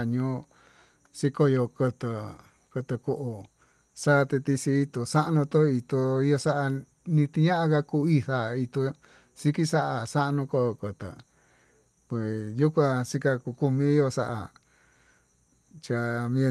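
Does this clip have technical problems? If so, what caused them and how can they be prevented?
No, no technical problems are audible in this speech clip. It has the sound of a call path, with the usual coding texture of a speech codec such as Opus and high frequencies that stop at around 12 kHz.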